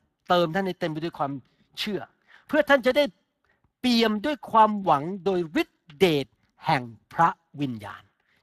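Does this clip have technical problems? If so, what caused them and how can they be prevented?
Yes. Throughout the speech, Speex codec damage is plainly audible: a hoarse, noisy grain, with nothing above 15.3 kHz, which points to a moderate Speex bitrate near 22 kbps. Too few bits reach the CELP excitation, so the speech gets buzzy roughness rather than the swirling or pre-echo of transform codecs. To prevent it, use a higher Speex quality setting or a modern codec such as Opus.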